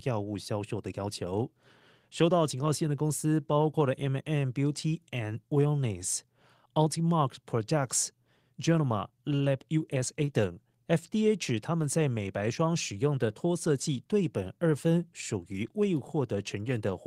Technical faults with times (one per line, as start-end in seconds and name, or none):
0.00-17.07 clock drift between sender and receiver
0.11-17.06 repeated timing corrections